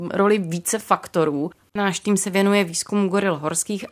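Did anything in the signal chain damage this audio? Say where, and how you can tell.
No, nothing in this speech recording stood out on listening as damage from any stage of the signal chain.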